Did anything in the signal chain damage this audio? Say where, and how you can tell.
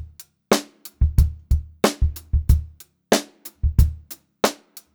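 No, none of the signal chain's stages, from the wiring through conversion, processing, transmission and playback, has left any audible damage on this audio.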